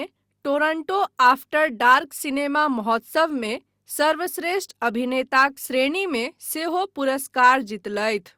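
No technical faults can be heard anywhere in this speech recording; the signal stays continuous and steady from its opening moment to its last.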